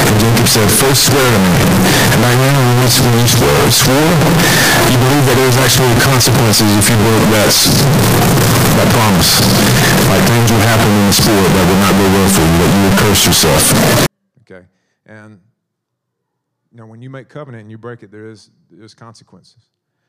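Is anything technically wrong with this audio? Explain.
Yes. From 0.0 to 14.06 s the speech turns nearly square and sits at a loud, fixed level with background noise as loud as the talking, though pitch still comes through. That's likely float read as integer: 32-bit float samples read as 32-bit integer.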